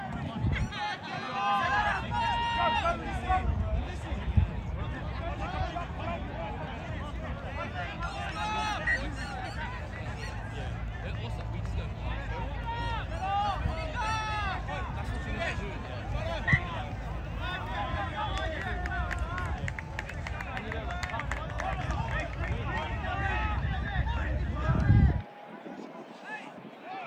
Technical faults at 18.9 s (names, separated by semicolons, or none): none